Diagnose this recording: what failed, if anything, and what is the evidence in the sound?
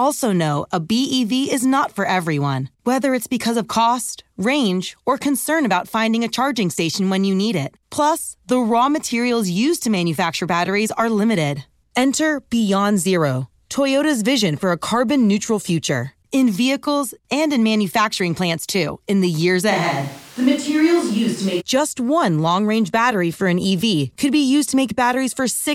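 At 19.72 s the speech abruptly goes roomy and hollow, with the low end thinned out, and it snaps back just as suddenly at 21.59 s. Loudness barely shifts, but background noise jumps up to roughly 25 dB below the speech. That's a switch to a distant microphone, most likely a brief dropout on the close mic's analogue path, so for those two seconds we're hearing a farther-off pickup capturing the room along with the talker.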